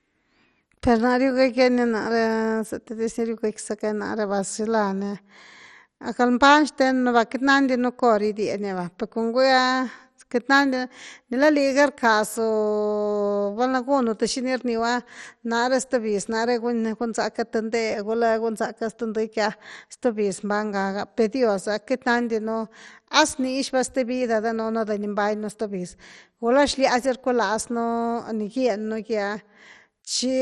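Speech with MP2 compression damage running through the whole clip, heavy enough that the sound turns dull and gurgling, with a granular roughness. Nothing reaches above 13.9 kHz, and the highest bands drop in and out as the bit budget runs short, which fits a low rate of about 56 kbps. The likely cause is Layer II coding. A plain low-pass filter would cut the top cleanly without that flickering, coarsely quantised texture.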